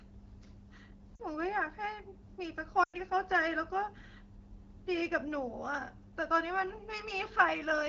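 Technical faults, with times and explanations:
1.16 to 1.20 s, lost AMR speech frames: the speech briefly dips and warbles for about 40 ms, which fits two 20 ms frames failing their checksum after radio errors. The AMR-WB decoder, otherwise clear at 12.65 kbit/s, fills the gap by repeating the last good pitch and vocal tract settings at reduced gain, so the sound fades toward near silence, then recovers slightly weak.
2.83 to 2.95 s, lost AMR speech frames: a longer run of about 100 ms, which points to five consecutive 20 ms frames lost. The decoder keeps extrapolating the last good frame while lowering the gain each time, so the speech drops to near silence within two frames, as wideband concealment does. When good frames return, the speech comes back briefly rough and quiet before the decoder settles.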